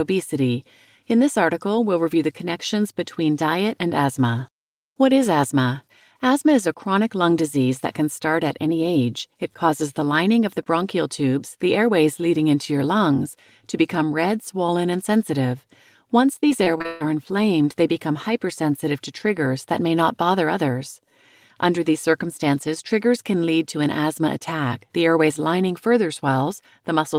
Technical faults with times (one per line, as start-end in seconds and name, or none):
16.33-17.02 repeated packet loss (robotic sound)